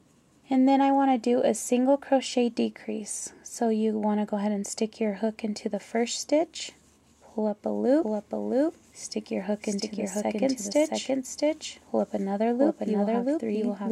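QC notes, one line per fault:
8.03 s to the end, doubled audio track: a second full-band copy of the sound cuts in abruptly and trails about 0.7 s behind at roughly the same level, with no decay or room colour. It's likely a slower second capture path getting mixed in.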